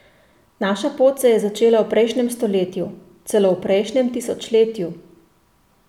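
Nothing in the recording stood out as a technical fault on listening.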